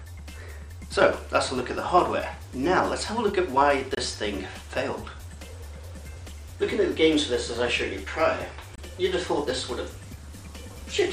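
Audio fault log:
3.95–3.99 s and 8.75–8.80 s, Bluetooth dropout: packets likely failed to reach the headphones in time and were discarded, so the output falls silent for about 44 ms, which fits a single lost frame of about 23 ms. Sound then resumes further along, as though playback had continued.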